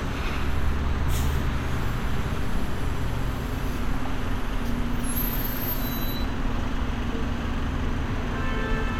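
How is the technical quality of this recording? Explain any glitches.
No glitches can be heard anywhere in the recording. The sound runs without any audible break or disturbance.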